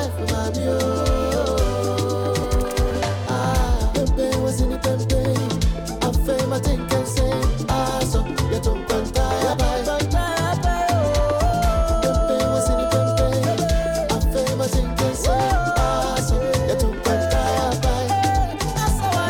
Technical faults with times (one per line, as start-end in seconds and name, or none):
2.43 compressed frames skipped
7.71 compressed frames skipped
9.53-9.56 compressed frames skipped
11.53-11.56 compressed frames skipped